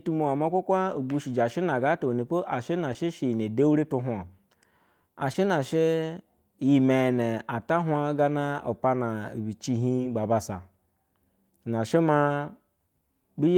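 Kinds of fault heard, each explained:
Short concealed packet loss: about 20 ms of the speech stream arrived too late to decode each time, and the receiver bridged the gap by extending the preceding sound, then crossfading back. This happens at 2.93, 5.33 and 9.96 s (just after "hwa gana lipana be"), each heard as a brief smear or wobble.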